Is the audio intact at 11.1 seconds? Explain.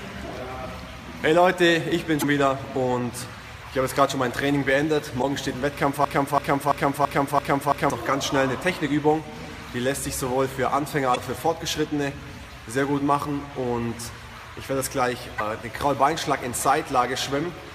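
No. From 11.12 to 11.17 s there is damaged data in a compressed stream. Corrupted bytes make the decoder misread frames and hunt for the next valid header, producing a brief chirp or blip. On a spectrogram it shows as a sudden broadband smear; the waveform shows a short discontinuity.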